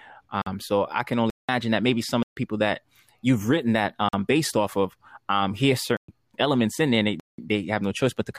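The speech drops into a block of digital silence six times: 0.42–0.46 s before "so i can", 1.30–1.49 s, 2.23–2.37 s between "that maybe some of" and "that you've written that", 4.09–4.13 s, 5.97–6.08 s, and 7.20–7.38 s after "elements in there". Each is likely an unfilled output buffer zeroed out. The 46 ms and 186 ms gaps fit 2048- and 8192-sample blocks. The gaps show as flat near-silent lines in the waveform and blank vertical stripes on the spectrogram, heard as short holes.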